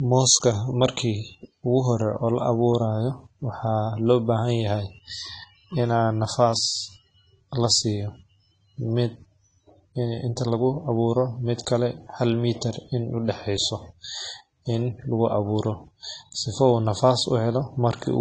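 From start to finish the speech sounds dull and smeared, with a fizzy, warbling texture on sibilants and held sounds. This is likely AAC compression: an AAC-LC encoder working at a low rate, consistent with roughly 32 kbps, quantises each frame's frequency lines coarsely against a hearing model, dropping the top band entirely and leaving gaps or noisy patches that cause the plainly audible artefacts.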